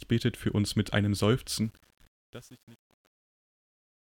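From 1.64 s, right after "für uns mit einem", the fade-out shows truncation distortion. Its steps fit an 8-bit undithered stage, so the speech turns gritty, worst from 1.78 s to the end. Unlike a dropout or gate, the fault tracks the falling level.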